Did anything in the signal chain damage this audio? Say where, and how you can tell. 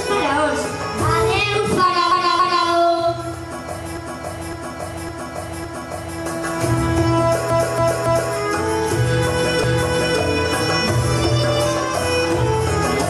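Yes. Repeated frames in the compressed stream, most plausibly at the storage or network stage, made the decoder play the same blocks again. A 278.6 ms block plays twice more from 2.12 to 2.67 s and three more times from 7.50 to 8.34 s. A 557.3 ms block plays four more times from 3.97 to 6.20 s and once more from 9.64 to 10.20 s. Each is heard as an identical stutter that jumps back in the sound, and together they add about 4.2 s. The block lengths fit runs of three and six codec frames.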